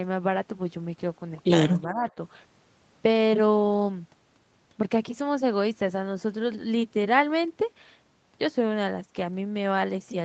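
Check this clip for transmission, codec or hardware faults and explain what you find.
One fault stands out, a brief dip in the speech level early in the clip.

From 1.87 to 2.06 s the speech sinks by roughly 10 dB for about a fifth of a second, then returns to its previous level. The likely cause is speech suppressed in double talk: with both ends talking at once, the echo canceller couldn't tell the near talker from loudspeaker echo and turned the outgoing signal down until the overlap ended. The top end stopping near 8 kHz is the ordinary band limit of the Opus call path, not part of this fault.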